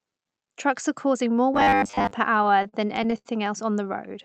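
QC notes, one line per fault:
1.54–2.11 s, robotic sound from repeated short buffers: right after "are causing more", most of the stretch becomes a rigid metallic buzz at 100 Hz. This is likely a 10 ms fragment being looped while fresh audio arrives too seldom, imposing that fixed pitch.
2.37–3.27 s, repeated stalls (stutter): the audio hitches nine times, with the longest hold at 72 ms. The receiver extended the last sound through each wait, about 196 ms in total, so nothing is lost but the phrase drags and stumbles.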